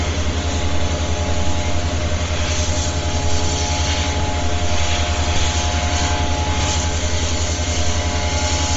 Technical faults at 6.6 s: Bluetooth LC3 compression; chunks out of order

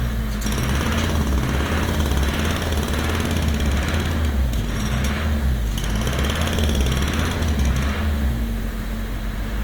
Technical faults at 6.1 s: Opus compression

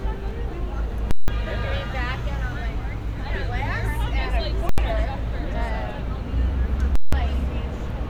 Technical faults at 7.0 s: invalid numbers at full scale

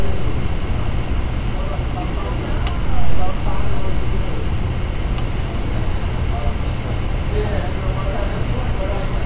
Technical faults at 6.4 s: none

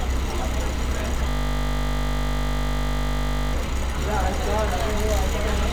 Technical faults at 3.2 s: system hang loop

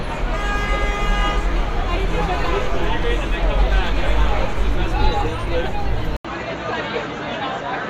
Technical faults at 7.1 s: input switched to a poorer device

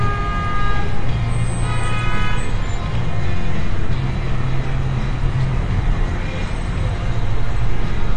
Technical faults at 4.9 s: AAC compression

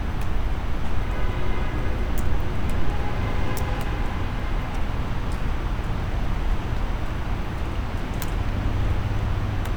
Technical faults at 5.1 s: none

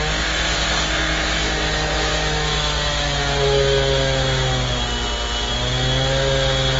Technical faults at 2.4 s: transcoding between lossy codecs

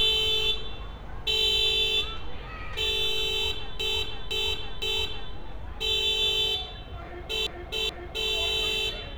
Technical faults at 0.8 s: none

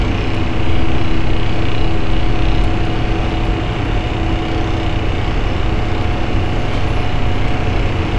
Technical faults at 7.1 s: none

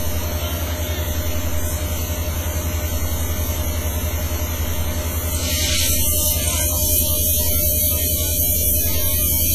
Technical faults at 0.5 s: WMA compression

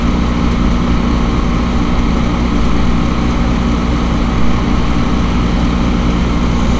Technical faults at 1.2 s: none

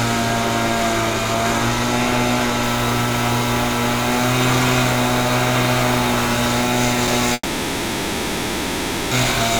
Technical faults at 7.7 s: long network dropout

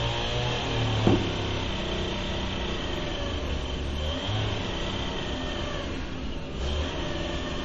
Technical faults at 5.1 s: MP3 compression

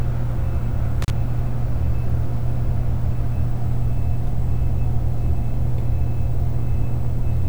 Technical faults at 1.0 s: intermittent contact

